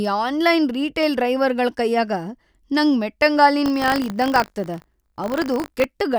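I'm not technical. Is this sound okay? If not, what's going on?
No. From 3.64 to 5.85 s the speech takes on a robotic buzz at 50 Hz, called buffer tearing. The playback program and the sound hardware have drifted out of step, so every 20 ms a tiny slice of audio from about 40 ms earlier gets spliced in.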